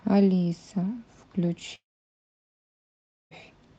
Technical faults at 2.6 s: long network dropout

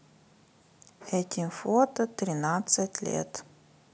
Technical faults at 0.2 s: none

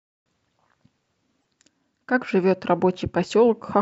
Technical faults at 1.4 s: broken MP3 bit reservoir

